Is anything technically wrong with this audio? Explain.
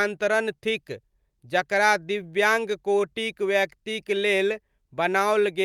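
Yes. There is clock drift between sender and receiver throughout the speech: the sender's clock runs roughly 4% slower than the receiver's, so the jitter buffer keeps draining. The receiver must keep stretching the incoming sound, which gives the timing a faint, recurring unevenness.

Repeated timing corrections run from 0.02 to 5.42 s. To cover the shortfall, the receiver repeats short pieces at uneven intervals, all in the same direction, playing the stretch at 96% speed and adding roughly a fifth of a second. The result is slight hiccups and a dragging, unsteady tempo.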